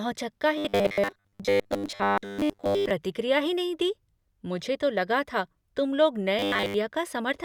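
Audio likely arrived too seldom, so a 10 ms buffer was replayed in place of most of the real signal. The result is robotic sound from repeated short buffers, a rigid metallic 100 Hz buzz, from 0.58 to 2.91 s before "ही नहीं दी मुझे" and from 6.39 to 6.74 s after "लगा था तुम लोग".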